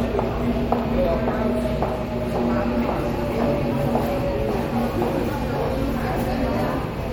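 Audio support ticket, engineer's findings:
Watery, swirly texture with metallic chirps and smeared attacks throughout; likely MP3 compression at a rate fitting 64 kbps, weak spectral lines toggling between frames. Content extends to 21.2 kHz.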